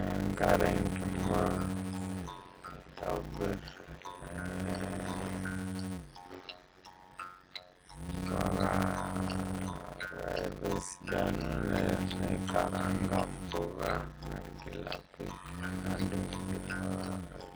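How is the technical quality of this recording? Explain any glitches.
The technical quality is poor. Two faults run through the whole recording.

Across the entire clip, the speech sounds watery and swirly, with metallic chirps on s sounds and smeared attacks. The likely cause is heavy MP3 compression. The damage fits a low bitrate around 32 kbps. Starved of bits, the encoder cuts the treble and lets weak frequency lines flicker between frames.

Also throughout, there is a block size mismatch with padding. A steady buzz sits at about 91.9 Hz. The speech runs at 0.533 times normal speed, yet keeps roughly its normal pitch. That fits a stage writing 256-sample blocks into larger ones, with each block's remainder filled by silence.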